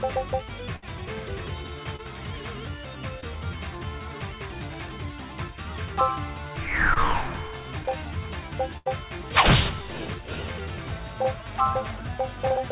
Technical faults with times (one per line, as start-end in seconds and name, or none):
0.76-0.84 burst of packet loss
1.96-2.00 short concealed packet loss
3.20-3.24 short concealed packet loss
6.94-6.98 short concealed packet loss
7.81-8.06 loose connector crackle
8.78-8.88 burst of packet loss